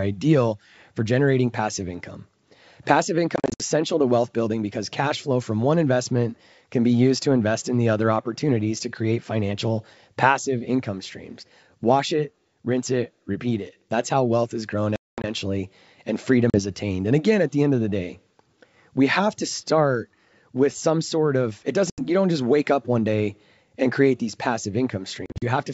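Speech over a G.722 wideband call at 64 kbit/s, with packet loss on an ADPCM call at five points. Lost audio is replaced by hard-edged silence. Around 3.36 to 3.62 s, 160 ms goes missing in short holes, the longest 60 ms. From 14.96 to 15.25 s one gap lasts 220 ms. Shorter drops follow at 16.50, 21.90 and 25.26 s. After each hole the decoder's predictor and step size no longer match the sender's, so the speech returns slightly distorted and briefly settles.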